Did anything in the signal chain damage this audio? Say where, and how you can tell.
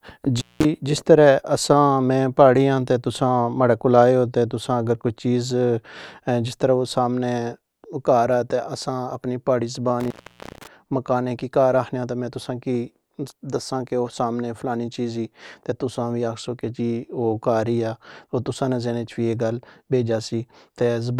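Yes, there's an intermittent contact in the analogue wiring. The speech cuts out from 0.37 to 0.65 s (open 190 ms) and from 10.00 to 10.67 s, just after "اپنی پہاڑی" (open 478 ms). Crackle marks each edge and faint hiss fills the gap, the sign of a loose plug breaking and remaking contact.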